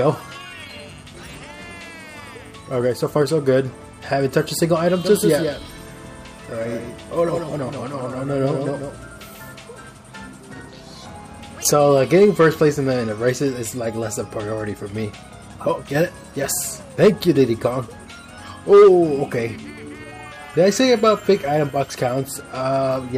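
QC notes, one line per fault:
5.04–9.48 s, doubled audio track: a second full-band copy of the sound runs roughly 150 ms behind the original, about 5 dB quieter, giving a distinct slapback with no decay tail or added room colour. The copy cuts in abruptly at 5.04 s and drops out just as abruptly at 9.48 s. This is likely the same signal being captured twice, once through a slower path, or an edit that left two offset copies overlapping.
21.54 s, dropped samples: a single sharp click, seen as a thin vertical line across the spectrum. The waveform jumps straight from one value to a later one because a handful of samples, a small fraction of a millisecond, are missing from the stream. The gap is far too short to remove audible content, so only the discontinuity is heard. The likely cause is a brief stall or overrun in the capture or transfer chain that skipped those samples.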